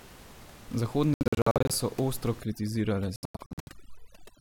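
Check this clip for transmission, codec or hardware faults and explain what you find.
Two faults can be heard: repeated gaps in the sound, and over-aggressive noise removal over the last two seconds. Room noise sits about 21 dB below the speech and belongs to the recording itself.

From 1.14 to 1.71 s, ending just before "so ostro", and again from 3.16 to 3.69 s, the speech breaks into clusters of short silences. This is likely a Bluetooth dropout. Packets reached the headphones too late and were discarded, and silence was played in their place. Roughly a third of a second goes missing in each stretch, in holes up to about 70 ms and 93 ms. Unlike a stall, the speech resumes where it would have been, with no delay.

From 2.41 s, right after "so ostro", to the end, there is overdone noise removal. A denoiser set too strong mutes any frequency band it mistakes for noise, and the soft parts of the speech go with it. 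The background drops and breaks up into twinkling specks.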